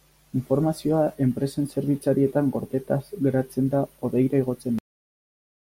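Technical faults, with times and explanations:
4.79–5.76 s: cut-off end. The speech stops mid-sound and drops straight to digital silence with no decay, because the final buffers were never written or played.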